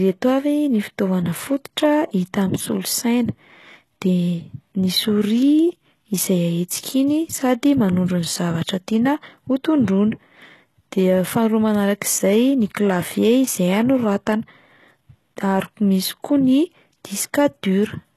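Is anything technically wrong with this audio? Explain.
Yes. Throughout the speech, the signal was likely squeezed through HE-AAC compression at a very low data rate, consistent with roughly 16 kbps. The codec spends its few bits on the lower spectrum and synthesizes the treble by copying lower bands upward under a coarse envelope, and nothing remains above 12.3 kHz. The damage is plainly audible: the top end sounds artificial, and s sounds come out gritty, metallic or lispy because the rebuilt harmonics do not match the real ones.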